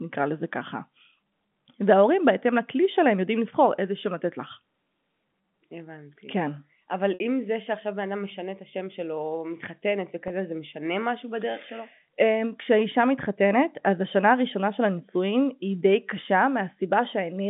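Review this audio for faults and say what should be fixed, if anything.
Two spots of packet loss with pitch repetition show up on the G.711 phone line: 7.14 to 7.20 s and 10.28 to 10.30 s. The receiver loops the last pitch period across each gap. The 20 ms one sounds briefly held and buzzy. The 60 ms one, which fits about three 20 ms packets going missing, fades down before the speech cross-fades back. A deeper jitter buffer or forward error correction on the link should keep those packets from dropping out.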